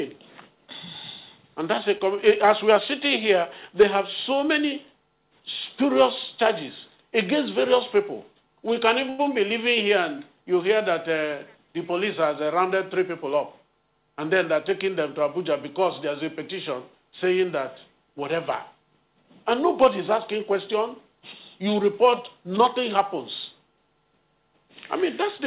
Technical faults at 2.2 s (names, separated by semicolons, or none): repeated stalls (stutter)